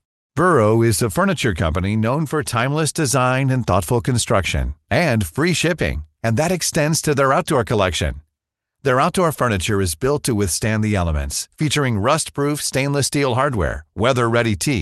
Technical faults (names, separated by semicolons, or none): none